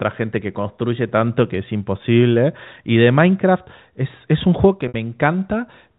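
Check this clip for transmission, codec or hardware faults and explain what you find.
One transmission fault stands out, a single brief dropout late in the speech, heard against the narrow telephone band of G.711 coding.

From 4.88 to 4.94 s there is packet loss with pitch repetition. About 60 ms of audio never arrived, which fits three 20 ms packets going missing. The receiver concealed the hole by replaying the last pitch cycle it had decoded, looping it across the gap. The result is a short, slightly held, buzzy tone where the speech momentarily freezes before normal sound resumes.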